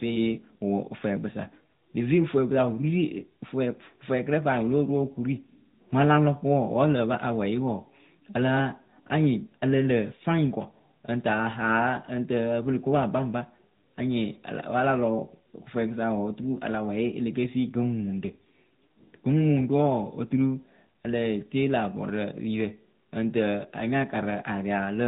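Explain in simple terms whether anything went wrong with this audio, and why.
AMR narrowband mobile codec coding runs through the whole recording, start to finish. The speech has been squeezed through the kind of codec used for 2G and 3G mobile calls, which samples at 8 kHz and rebuilds the voice from a simple model of the throat and mouth, refreshed every few milliseconds. Everything above about 3.8 kHz is gone, so the voice sounds muffled and phone-like, and the coding damage is plainly audible.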